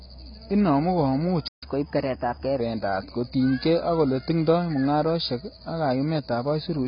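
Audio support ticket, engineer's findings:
Codec: likely AAC-LC at a very low rate; heavy damage fits roughly 16 kbps. Throughout: AAC compression leaves nothing above 5.1 kHz, so the speech sounds dull and smeared, with a warbling, fizzy texture on sibilants and sustained sounds.

Player: output starved or thread blocked, likely a playback stall. Silence at 1.48–1.63 s, about 145 ms, cutting the speech off mid-flow before it resumes.

Player recovery: catch-up at higher speed by resampling the backlog. From 1.63 to 2.59 s, starting with "kotiny gee ak ele", playback runs at 1.15x and pitch rises about two semitones.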